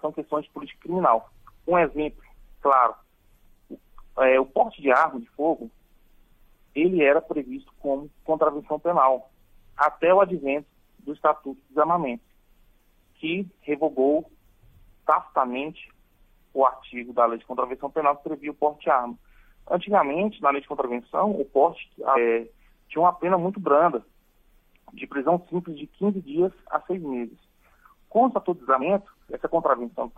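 The audio has damaged data in a compressed stream at 22.12 to 22.18 s and 28.78 to 28.83 s. Corrupt frames make the decoder lose sync and hunt for the next header, unlike a plain playback dropout.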